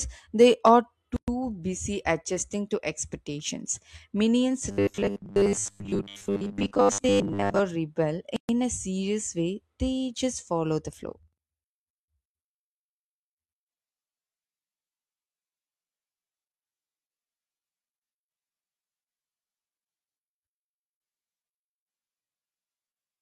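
At 1.16 s the speech drops out for about 115 ms, until 1.28 s, and again at 8.36 s for about 127 ms, until 8.49 s. Each is a gap at a join of encoded pieces. Separately encoded segments were spliced without trimming the encoder's start-up delay and final-frame padding, so that silence stayed in. The waveform shows a flat stretch with steep, slightly smeared edges, and the spectrogram shows a clean vertical blank band before the speech resumes where it left off.

From 4.71 s to 7.61 s the speech turns into robotic sound from repeated short buffers: a rigid, metallic 100 Hz buzz that still roughly tracks the syllables. The likely cause is audio arriving too slowly, with playback looping the last 10 ms to fill the time, so most of the real signal in that span is replaced by repeats. On the waveform this appears as an identical 10 ms cycle repeated over and over. The spectrogram shows evenly spaced harmonics locked at 100 Hz intervals.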